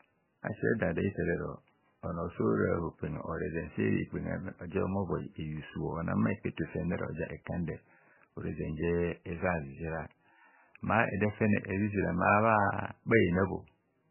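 Throughout the recording, the encoder appears to have been starved of bits, most likely by MP3 compression at a very low rate, on the order of 9 kbps. To cope, it discards everything above 3 kHz and drops weak frequency lines that then flicker in and out from frame to frame. The speech is left dull and muffled, with a heavy watery, swirling texture, metallic chirps on s sounds, and smeared consonant onsets.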